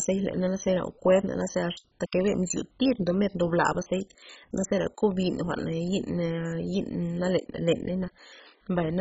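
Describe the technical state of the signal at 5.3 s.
At 5.3 s, as throughout the clip, the speech has likely passed through heavy MP2 compression at a very low rate, fitting about 16 kbps: starved sub-bands are dropped, leaving nothing above 7.5 kHz and a dull, gurgling, granular sound.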